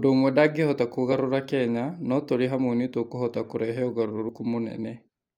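Brief jumps break the speech three times: at 1.11 s after "ũmwe ndangĩhota", at 2.47 s between "no tũrĩ" and "hamwe nĩ tũkũhota kũrehe", and at 4.28 s after "hamwe nĩ tũkũhota kũrehe". These are compressed frames skipped. Missing or rejected frames make the audio jump ahead about 20 ms the first two times and roughly 30 ms at the third.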